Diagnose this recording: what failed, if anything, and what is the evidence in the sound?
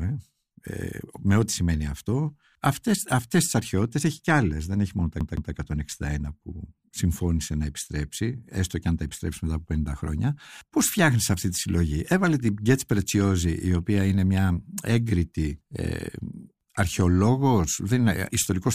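Just after "δεν έχει μόνο τα", from 5.20 to 5.53 s, the speech stutters: a fragment of about 0.16 s plays twice in quick, even succession, with a brief mute at each jump. This is a CD stuck on one turn, a playback fault where a scratch throws the laser back a track every revolution.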